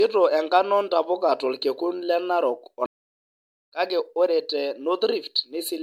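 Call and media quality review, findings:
Generation loss throughout: likely repeated MP3 re-encoding, around seven passes, consistent with a 96 kbit/s chain. Speech sounds swirly, smeared and hollow, with blurred attacks.

Playback stall, 2.86–3.66 s: player likely starved of data or blocked, output silent for 0.8 s. Speech cuts off mid-flow, resuming at "kake ore te".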